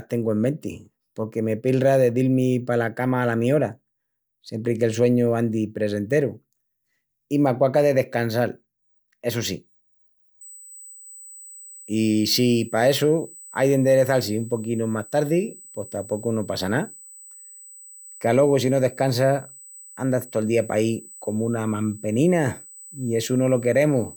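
USB microframe current leaks through power or ground from 10.41 s onward, causing USB whine, an 8 kHz tone about 20 dB below the speech.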